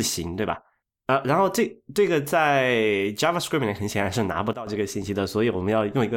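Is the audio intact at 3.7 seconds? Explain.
Yes, the audio at 3.7 seconds is intact, with no dropout, click, distortion or other fault at that moment.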